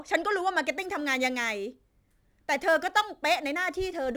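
From 0.71 s to the end, the speech carries crude rate conversion: a 44.1 to 48 kHz change made by repeating nearest samples without filtering. This adds a gritty, inharmonic fizz roughly 25 dB down that tracks loud, bright syllables, unlike codec smearing, which blurs rather than buzzes.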